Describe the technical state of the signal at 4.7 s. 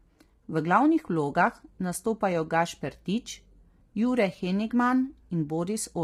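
At 4.7 s the speech is rough and grainy, with noise between harmonics and a dulled top band, as throughout the clip; likely low-delay AAC compression, whose short frames resolve pitch poorly, heavily strained at a rate that fits about 24 kbps.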